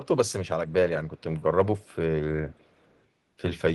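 Echo leak shows up twice: a tiny, very faint scrap at 1.17 to 1.23 s, then a longer, stronger stretch from 2.46 to 3.04 s. Both lag the speech by 413 ms, likely a speakerphone whose echo canceller missed some of its mic pickup.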